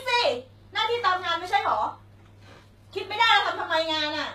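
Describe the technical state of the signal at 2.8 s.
HE-AAC compression at 2.8 s, as throughout: the treble is plainly gritty, with nothing above 14.9 kHz, likely from band replication at a rate fitting about 20 kbps.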